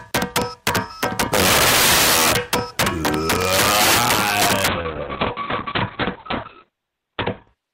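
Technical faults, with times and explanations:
Throughout, integer overflow: the signal is driven about 15 dB past full scale, and around one sample in twenty wraps to the opposite extreme instead of being limited. Each wrapped peak jumps across the whole range, so loud moments break into violent cracks far harsher than clipping.
4.68 s to the end, call bitrate drop: the bandwidth estimate collapses and the encoder codes far more coarsely, which fits a fall from 64 to 7 kbps. Audio above 4 kHz disappears, leaving a muffled, watery sound that stays at its worst for about 2.0 s.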